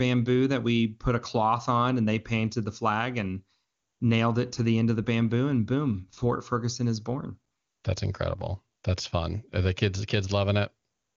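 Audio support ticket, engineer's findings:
No faults found in speech.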